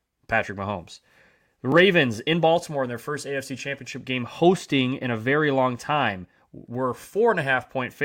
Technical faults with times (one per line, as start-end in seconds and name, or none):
1.72 repeated buffer